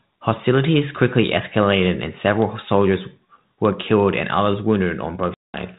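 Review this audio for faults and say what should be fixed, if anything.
Packet loss on an ADPCM call: about ten packets went missing and the gap was filled with silence, so the decoder's adaptive predictor and step size lost track of the sender's. From 5.34 to 5.57 s the sound drops out abruptly, with about 200 ms lost behind hard edges, and it comes back with some roughness before settling within some tens of milliseconds. The band-limited 32 kbit/s G.726 coding underneath is working normally. To prevent this, add jitter buffering with packet-loss concealment that also resynchronises the ADPCM decoder state after a loss.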